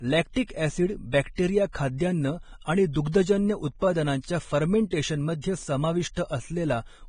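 From start to end of the speech, nothing remains above 9.7 kHz, and the treble beneath is grainy and hissy, with blurred attacks. Heavy Vorbis compression is the likely cause, consistent with a bitrate near 23 kbps. Unlike a plain low-pass, lost detail becomes noise rather than silence.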